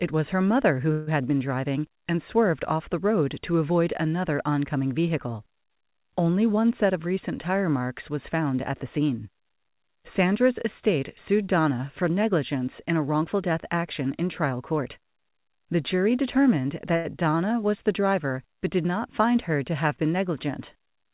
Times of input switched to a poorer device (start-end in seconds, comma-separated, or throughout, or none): none